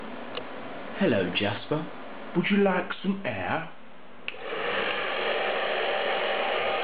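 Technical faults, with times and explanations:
2.37 to 6.83 s, wrong sample rate: speed falls to 0.919 times and pitch drops 1.47 semitones together, fitting 48 kHz audio played unconverted at 44.1 kHz.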